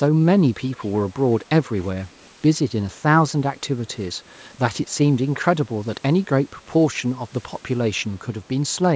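An echo canceller on a loudspeaker end of the call likely let part of its microphone pickup slip through and be sent back, so this speech carries an echo leak. A faint copy trailing the speech by 163 ms appears from 0.68 to 0.88 s, around 30 dB down, and again, weaker still near 40 dB down, from 8.01 to 8.21 s and at 8.43 to 8.48 s, within call audio that stops at 8 kHz.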